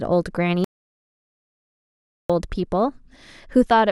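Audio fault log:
0.64–2.30 s, audio dropout to silence: speech cuts out to dead silence for 1.65 s, with no room tone. Input likely lost while recording continued.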